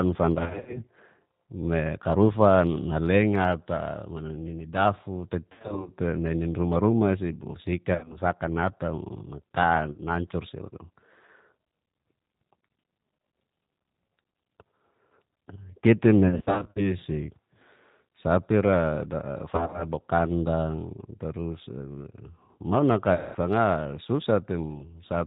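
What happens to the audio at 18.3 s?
At 18.3 s the speech carries plainly audible G.729 codec damage, as it does across the whole recording. The coder rebuilds each 10 ms frame from a vocal tract filter, a pitch predictor and a few pulses, so the voice sounds rough, buzzy and slightly synthetic, which fits a G.729A stream at 8 kbit/s. On a spectrogram, energy stops sharply at 4 kHz, and harmonics look smeared and blocky frame to frame.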